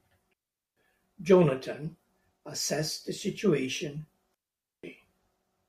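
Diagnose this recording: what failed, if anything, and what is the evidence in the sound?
The digital wireless link failed twice, at 0.33 to 0.77 s and again at 4.34 to 4.84 s. Each time the speech drops into a clean hole of near silence lasting about 0.43 s and 0.49 s, entered and left with a very brief fade. This is a digital wireless dropout. The receiver lost too much of the data stream and muted its output. No hiss or squelch burst frames either hole, which rules out an analogue wireless dropout.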